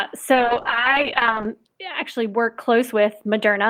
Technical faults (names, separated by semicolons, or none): call bitrate drop